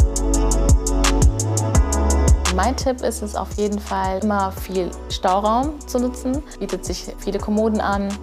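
Clock drift buffer slips from 1.91 to 8.08 s: four or so regular clicks every 2.06 s, likely unsynchronised clocks roughly 100 ppm apart, dropping or repeating a few samples.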